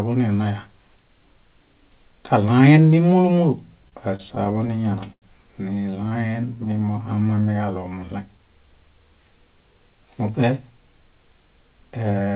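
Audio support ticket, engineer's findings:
Repeated stalls (stutter), 3.84–5.25 s, right after "kaɭaen mĩmúlu múlu": 14 short holds, longest 89 ms, about 18% of span concealed. Jitter buffer ran dry from late packets, and the receiver held the last sound. Nothing lost, audio drags.

Repeated stalls (stutter), 5.86–6.69 s: 10 brief holds, longest 18 ms, 12% concealed. Same buffer underrun cause, milder.

Jitter buffer slow-down, 6.47–8.73 s: playback at 90% speed, same pitch, sounds drawn out. The receiver repeated pitch periods to rebuild its reserve, adding 241 ms.

Jitter buffer speed-up, 10.50–12.34 s: playback at 107% speed, same pitch, hurried. Buffer over target, so the receiver trimmed pitch periods, removing about 150 ms.

The call path band-limits at 4 kHz, consistent with G.711 A-law at 64 kbps.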